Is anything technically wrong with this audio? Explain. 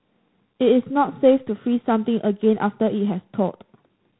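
Yes. Throughout the speech there is G.726 ADPCM coding damage, at a level that fits the 24 kbit/s rate. That codec sends only a few bits per sample describing the difference from an adaptive prediction, so quantisation noise rides on top of the signal and swells and fades with its loudness. The result is a harsh, rasping hiss woven into every syllable. On a spectrogram, energy stops sharply at about 3.9 kHz, with a grainy noise floor filling the band beneath that tracks the speech envelope.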